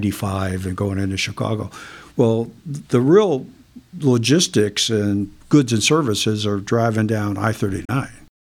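Speech with a digital broadcast dropout from 7.85 to 7.90 s, right after "services are driving down": the receiver mutes with an 8 ms fade, losing about 32 ms of audio, consistent with a single failed frame.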